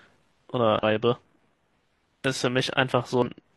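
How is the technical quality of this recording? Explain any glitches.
The speech recording has two glitches of the same kind. Damaged data in a compressed stream occurs at 0.79–0.83 s and again at 3.22–3.28 s, lasting about 44 ms and 54 ms respectively. At those points the encoded bytes are corrupt, so the decoder misreads the affected frames, loses its place in the bitstream and has to hunt for the next valid frame header. The result is a short chirp, squawk, click or hole cutting into the speech.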